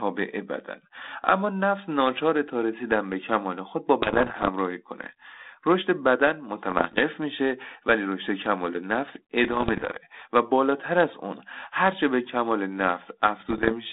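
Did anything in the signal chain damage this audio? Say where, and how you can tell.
Yes. The damage enters on the ADPCM transmission link. Bit errors on an ADPCM link cause pops and rough, crackly bursts at 4.02–4.49 s, 6.70–7.03 s, 9.44–9.97 s and 13.40–13.73 s. The first burst is harshest, with an error rate near 2 percent. The others sit around 1 percent or below. Each flipped bit throws off the decoder's step size and prediction. So the error rings on as a brief level jump. The 32 kbit/s G.726 band, 200 Hz to 3.7 kHz, stays intact.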